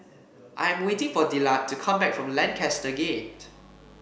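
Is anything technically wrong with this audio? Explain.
Yes. Mains buzz runs from 2.43 s to the end. Spiky interference at 50 Hz, from dimmer or rectifier switching or a missing shield, adds a dense stack of harmonics into kilohertz range. The result is a steady, raspy buzz about 30 dB below the speech.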